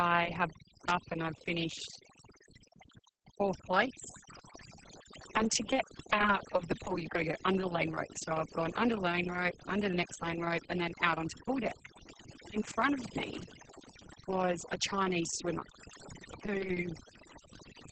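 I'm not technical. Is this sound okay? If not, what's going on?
No, not really. Two problems run through the whole clip.

First, overdone noise removal. A cleanup tool was pushed too hard, so the background drops to near silence with little twinkly specks, and the quieter parts of the speech get scraped away too.

Second, Opus voice compression squeezed very hard. To save space it throws out everything above roughly 8.8 kHz and only roughly sketches the rest, so the speech comes across muffled, a bit hoarse and faintly robotic from start to finish.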